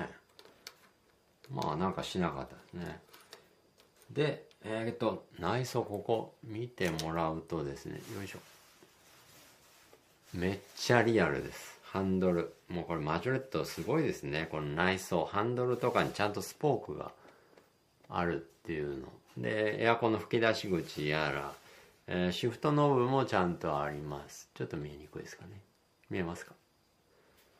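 No technical faults can be heard anywhere in the signal.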